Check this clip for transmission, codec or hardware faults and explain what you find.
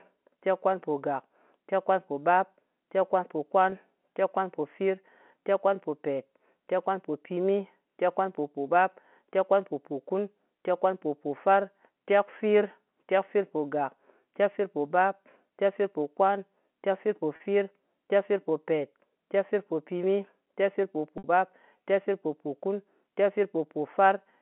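Yes, there are three brief transmission dropouts, all of the same type, on a G.711 telephone line limited to roughly 200 Hz to 3.4 kHz.

Packet loss with pitch repetition occurs at 3.70 to 3.72 s, 17.36 to 17.40 s and 21.18 to 21.24 s. To cover each gap of 20, 40 and 60 ms, which fits one, two and three lost 20 ms packets, the receiver replays the last pitch cycle. This makes the speech hang on a short, buzzy held tone, and the longest gap audibly thins out before the speech returns.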